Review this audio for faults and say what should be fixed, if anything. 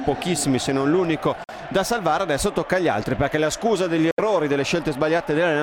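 The sound cuts out twice, at 1.44 to 1.50 s (about 46 ms missing) and 4.11 to 4.20 s (about 70 ms), then resumes further along as though it had kept playing, a likely Bluetooth dropout consistent with two and three lost packets. Each shows as a vertical blank band on a spectrogram and a flat gap in the waveform. Keep the transmitter close with a clear line of sight, and away from busy 2.4 GHz Wi-Fi, to prevent it.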